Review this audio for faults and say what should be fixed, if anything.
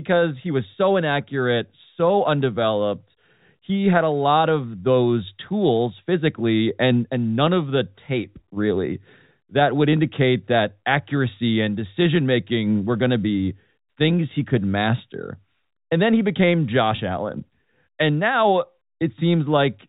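There's a brief packet loss with pitch repetition at 16.96 to 16.98 s, right after "then he became." About 20 ms went missing, which fits a single lost packet on the G.711 telephone line. The receiver bridged it by looping the last pitch period, so you get a tiny held, slightly buzzy blip. To prevent it, add a jitter buffer with some headroom or forward error correction so one dropped packet doesn't leave a gap.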